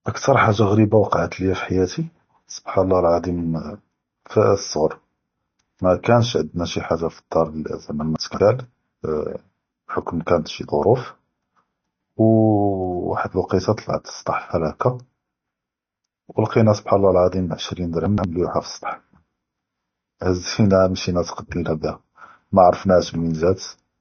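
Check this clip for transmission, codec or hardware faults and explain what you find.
Two problems show up in this speech clip. Throughout, there's nothing above 6.5 kHz and a watery, swirly smear, likely MP3 compression at a low bitrate around 32 kbps, cutting treble and flickering weak detail.

Chunks out of order hit at 8.16–8.4 s and 18.06–18.24 s: 60 ms blocks play late, about three and two slots behind, giving jumbled moments.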